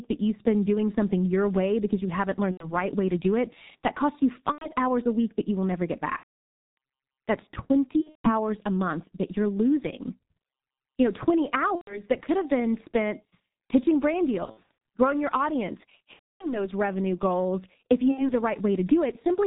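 Throughout, the speech is muffled and hoarse, with nothing above 4 kHz and smeared consonants. This is the G.723.1 codec, which squeezes speech to about 6.3 kbit/s in 30 ms frames. It updates its model of the voice too slowly to track fast changes, so the damage here is heavy.

At 2.51 to 2.75 s, 4.52 to 4.70 s, 6.18 to 6.33 s, 8.01 to 8.32 s, 11.75 to 12.03 s, 14.45 to 14.67 s, 16.13 to 16.70 s and 18.11 to 18.32 s, the voice stretches into a buzzy tone or tinted noise that fades, then comes back weak or distorted. This is VoIP packet loss concealed by the speech codec. The decoder kept extending its last pitch and filter at falling gain. The gaps range from about 60 ms to several hundred milliseconds, and those at 8.01 s and 14.45 s are broken into scattered short dropouts.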